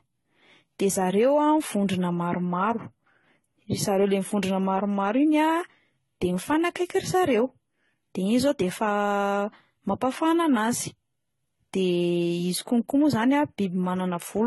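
A speech recording has most likely been passed through a chain of lossy codecs, transcoding between lossy codecs, with a very low-rate parametric stage near the start and an AAC-style stage at the end. Each encode re-spends its bits on the earlier codec's damage and adds its own, so the different artefacts are heard together throughout. Nothing survives above 11.8 kHz, the lowest cut-off in the chain.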